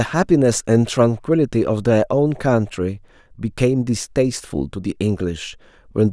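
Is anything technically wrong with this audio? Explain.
No, nothing is technically wrong with this audio.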